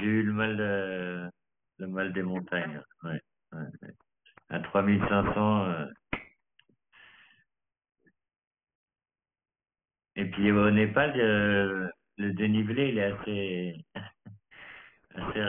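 From start to finish the speech sounds gritty and metallic, with sibilants turned harsh and a clangy edge, and the spectrum stops abruptly at 3 kHz. This is aliasing. The audio was resampled down, which fits a rate of about 6 kHz, with no anti-alias filter beforehand. Everything above the 3 kHz fold point was mirrored back below it as unrelated tones, sitting only around 15 dB under the speech.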